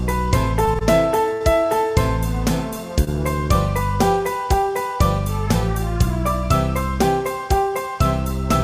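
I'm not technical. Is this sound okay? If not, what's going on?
No. Short stalls from a late packet at 0.65, 0.79, 1.33 and 3.04 s briefly hold the sound while waiting, longest 73 ms at 1.33 s.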